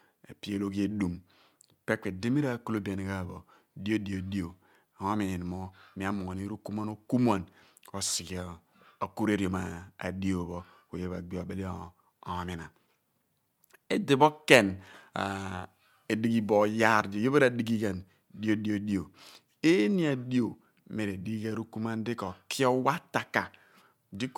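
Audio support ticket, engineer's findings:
Listened through the speech recording and found nothing to flag, so no action needed on the audio side for this one.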